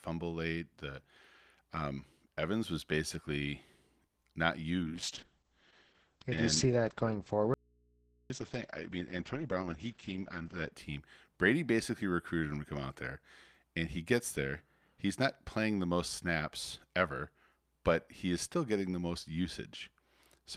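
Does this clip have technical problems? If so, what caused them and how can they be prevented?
Yes, there are five problems.

Just after "was basically", a short stall from a late packet runs from 4.07 to 4.18 s. The jitter buffer ran dry, so the last sound is held for 90 ms, then speech resumes where it left off. Unlike packet loss, nothing is skipped. A deeper jitter buffer or steadier network delay would prevent it.

At 4.22 to 4.25 s there is short concealed packet loss. Here 20 ms never arrived and was patched by extending the previous sound, leaving a brief smear where something really is missing. Forward error correction or redundancy would cover such gaps.

From 4.83 to 10.78 s there is a call bitrate drop from 40 to 9 kbps, with the audio band narrowing from 20 kHz to 8 kHz. The speech stays continuous but sounds muffled and coarse, not cut. More reliable uplink capacity, or a higher minimum bitrate, would avoid it.

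Between 7.54 and 8.30 s the speech cuts out abruptly for about 0.76 s, leaving only hum about 35 dB below the speech level. This is an audio dropout to a faint residue, likely a break in the signal feed while the input stayed live. Unlike a pause, the hum shows the path was open. Secure connections and stable capture hardware would prevent it.

From 8.98 to 10.13 s a jitter buffer speed-up plays the audio at 107% speed, trimming about a tenth of a second of pitch periods. The speech sounds hurried at the same pitch, unlike a pitch-shifting speed change. Smoother packet delivery would reduce the buffer buildup that triggers it.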